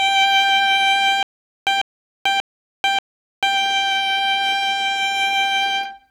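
From 1.23 s to 3.57 s the music turns into a stutter with silent gaps: a short burst of about 146 ms plays, then about 440 ms of dead digital silence follows, and this repeats four times at an even period of roughly 586 ms. The likely cause is a stalled player or stream that replayed its last buffered fragment at each retry and then ran dry, so the music meant for that stretch is lost.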